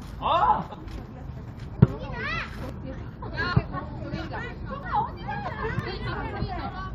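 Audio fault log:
0.74, 1.77, 2.69, 3.53, 4.83, 5.48 and 6.13 s: dropped buffer (overrun). At each, the sound lurches forward with no gap, likely because samples were overwritten before being read. Roughly 0.3 s goes missing at most, about 0.1 to 0.2 s at 1.77, 2.69 and 3.53 s.
5.79 s: overlap between stream segments. A tiny skip as two segments, consistent with 6-second segments, meet with overlapping time stamps. The player trims the supposed overlap, so under 20 ms of real sound vanishes and the waveform jumps abruptly.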